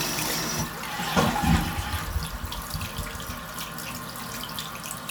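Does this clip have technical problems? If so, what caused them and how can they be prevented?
No, nothing in this recording of sounds calls for diagnosis or prevention.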